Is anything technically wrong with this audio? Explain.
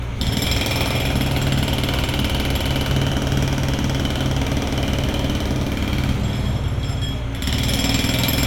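No, nothing here sounds technically wrong, and the audio comes through without any fault worth pointing to.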